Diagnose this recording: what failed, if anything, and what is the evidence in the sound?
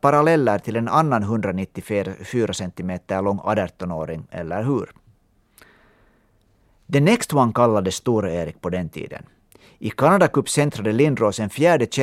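Listening carefully to the speech in this recording, nothing stood out as a failure at any stage of the chain.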